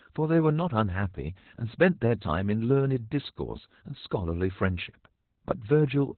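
Throughout, heavy Opus voice compression, which fits narrowband SILK near 8 kbps, cuts everything above 4.2 kHz, leaving the speech muffled, hoarse and slightly robotic.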